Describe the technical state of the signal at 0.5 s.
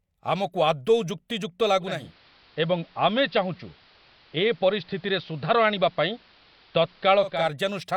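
At 0.5 s the signal is intact, with no audible fault at that moment.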